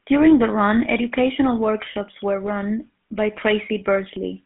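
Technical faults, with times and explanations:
Throughout, GSM full-rate codec: the speech sits in a 150 Hz to 3.6 kHz band with nothing above 3.8 kHz. Its coarse pulse excitation adds a plainly audible buzzy, gravelly roughness, which fits a 13 kbps stream, whereas a plain telephone filter would sound narrow but smooth.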